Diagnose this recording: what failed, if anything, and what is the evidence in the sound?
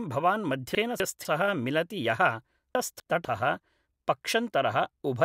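The fault is chunks out of order, at the buffer stage. Between 0.75 and 1.25 s, and again between 2.75 and 3.25 s, the speech briefly jumbles. In each window one 250 ms block plays one position late, after the block that should follow it. No audio is lost, but the sequence is scrambled. The three hard splices per window fit blocks being queued or written out of order.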